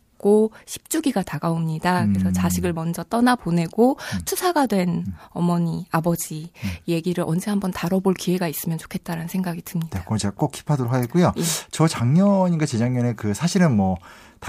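No technical faults can be heard anywhere in the recording.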